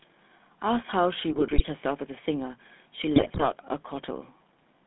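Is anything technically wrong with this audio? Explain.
Yes. The speech has passed through the GSM full-rate codec for its whole length, and it is hit by GSM bit errors twice.

Throughout, the GSM full-rate codec rebuilds the voice from a vocal-tract filter excited by a thinned, pulse-like signal, at a coarseness that fits its 13 kbps rate. The line passes only about 200 Hz to 3.7 kHz, so the sound is muffled and lacks low body. The crude excitation leaves a plainly audible buzzy, gravelly roughness on the voice.

From 1.32 to 1.62 s and again from 3.16 to 3.45 s, GSM bit errors corrupt the decoder's filter, pitch and gain values, with the second burst sounding denser, which points to an error rate of about 3% against about 2% in the first. Each damaged frame rebuilds the wrong spectrum or level, so the voice breaks into squawks, pops and gargling for roughly a third of a second each time.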